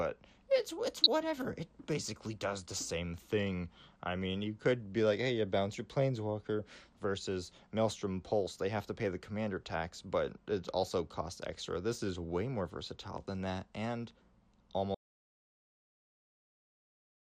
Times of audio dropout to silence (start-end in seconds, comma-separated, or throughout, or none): 14.94-17.37